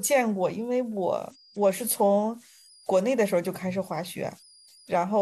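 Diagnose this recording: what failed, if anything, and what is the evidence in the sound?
At the converter stage, converter idle tones run through the whole speech clip as a faint whistle around 5 kHz, about 31 dB below the signal, clearest in pauses. An undithered delta-sigma modulator falls into repeating bit patterns on small inputs. Unlike mains hum, the tone is high and unrelated to 50 or 60 Hz.

From 1.30 to 1.37 s there is damaged data in a compressed stream, a fault in the codec or storage stage. It is a brief disruption of about 0.07 s. The decoder misreads corrupt frames, loses sync and hunts for the next header. A network dropout would leave a silent gap instead of decoded garbage.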